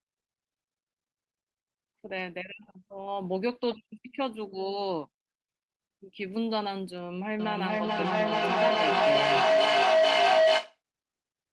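From 7.39 s to 10.81 s a feedback howl builds near 700 Hz, peaking about 9 dB above the speech and pulsing roughly every 400 ms, as a mic-to-speaker loop gains level each pass. A spectrogram shows one bright, thickening horizontal line; the waveform swells rhythmically.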